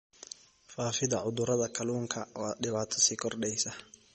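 Across the whole speech clip the sound is watery and swirly, with the treble gone above about 8.4 kHz and sibilants chirping metallically. This is likely MP3 compression at a low bitrate, around 32 kbps, where the encoder cuts the top band and lets weak frequency lines flicker between frames.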